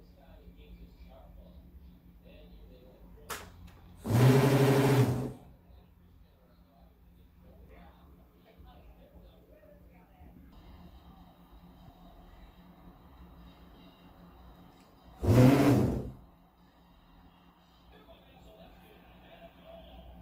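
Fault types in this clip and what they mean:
Adaptive stream at a lower bitrate: the player switched down to a cheaper version of the stream partway through, presumably because the connection slowed. From about 14.89 s to the end at 20.22 s coding artefacts are more noticeable than before. The quality drop is abrupt with no gap, which fits a step from around 64 kbit/s Opus down to roughly 24 kbit/s.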